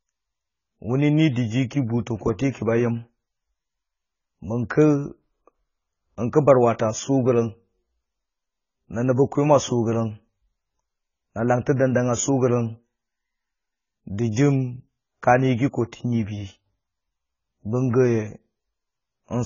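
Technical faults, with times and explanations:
Throughout, AAC compression: the speech sounds dull and smeared, with nothing above 7 kHz and a warbly, fizzy edge on sibilants and held sounds. That's likely a heavily squeezed AAC-LC encode, and the low cut-off and patchy spectrum fit a bitrate around 16 kbps.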